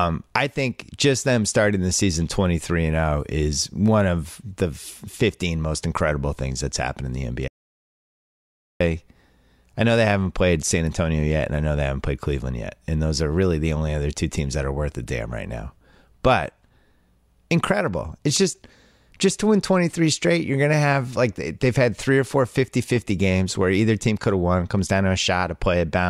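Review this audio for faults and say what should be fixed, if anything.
At 7.48 s the speech cuts off mid-flow into dead silence with no room tone at all, and it resumes abruptly at 8.80 s. That is an audio dropout to silence lasting about 1.33 s, and whatever was said in that stretch is gone. The likely cause is a brief loss of the input signal, such as a loose connection, a failed link or an accidental mute, while the recorder kept writing silence. To prevent it, secure cables and connections, lock mute controls, and monitor the input level live during recording.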